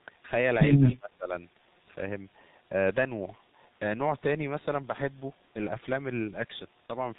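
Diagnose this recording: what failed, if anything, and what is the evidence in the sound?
Codec stage: the whole speech track is muffled and hoarse, with nothing above 4 kHz and smeared consonants. That's heavy G.723.1 coding at around 6.3 kbit/s.

Call processing: from 0.94 to 1.33 s the speech sinks by about 20 dB. It's likely speech suppressed in double talk, with the echo canceller ducking both sides.

Network: at 6.86 to 6.93 s there's a brief fading smear. That's VoIP packet loss concealed by the speech codec, consistent with one lost 30 ms frame.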